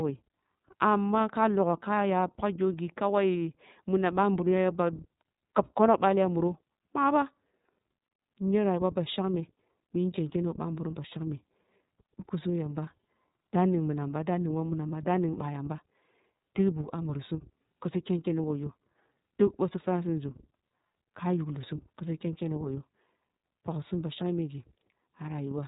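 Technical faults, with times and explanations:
Throughout, iLBC codec. Nothing above 3.8 kHz gets through, so the speech sounds thin and boxed-in, like a phone line. The codec works in 30 ms frames. It codes each frame's excitation independently of the frame before. That leaves a rough, slightly synthetic grain running through every phrase, and the damage is plainly audible. The coarseness fits iLBC's 13.33 kbps mode, the lower-rate setting that uses 30 ms frames.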